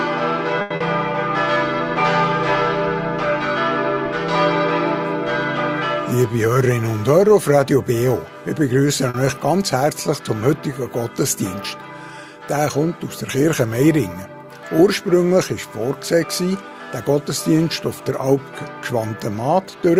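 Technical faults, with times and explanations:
0.61–0.73 s and 9.10–9.17 s, short stall from a late packet: a packet had not arrived when it was due, so the jitter buffer ran dry and the receiver held the last sound for 90 ms the first time and 40 ms the second, then resumed exactly where it left off. Nothing is lost, and the held sound has a slight buzz or dip. Unlike concealed loss, the audio simply waits, and the delay grows by the length of the hold.
0.76–0.83 s, short concealed packet loss: just after the first stall, 60 ms of audio never reached the decoder in time. The receiver covered the hole with 40 ms of continued sound before blending back, which gives a brief smear or wobble. Unlike a stall, material is actually missing here, and the replacement is shorter than the gap, so the delay drops slightly rather than growing.
6.38–6.93 s and 16.27–16.71 s, jitter buffer speed-up: the buffer had built up more audio than its target, so the receiver trimmed repeated pitch-period-sized pieces to catch up. 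About 70 ms is removed in the first span, where playback runs at 111% speed, and about 50 ms in the second, at 110%. The sound is hurried but stays at the same pitch, whereas a stall or concealment leaves a single local glitch.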